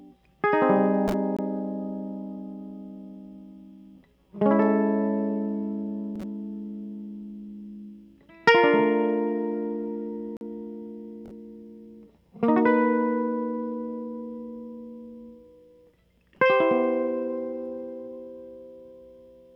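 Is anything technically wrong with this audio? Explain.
Yes. The music has two blocks of digital silence, from 1.37 to 1.39 s (about 21 ms, which fits a 1024-sample buffer) and from 10.37 to 10.41 s (about 43 ms, consistent with 2048 samples). Each time, the output went silent, likely when a buffer wasn't filled, and the audio drops out and returns with no fade. The first sounds like a very short hole, the second like a brief hole. Unlike a fade-out or a concealed packet loss, nothing smooths the cut.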